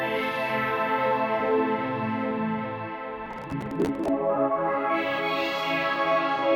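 From 3.26 to 4.08 s the music breaks into processor overload crackle: a gritty, tearing burst riding on top of the sound for most of a second. The processor couldn't finish its small audio buffers on time, and around fifty deadlines slipped over that stretch. Each miss simply drops its chunk, leaving a tiny hard-edged gap, and the spacing fits buffers of roughly 10 ms. Strung together, those skips make the crackle, which clears once the load eases.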